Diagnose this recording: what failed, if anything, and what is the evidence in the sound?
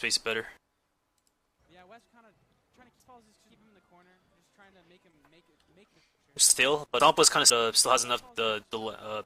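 Chunks out of order at 2.0 to 3.5 s and 6.5 to 7.5 s: a 500 ms block plays two blocks late, then one block late, in the buffer or network delivery stage. The sound jumps back and forth across the hard joins.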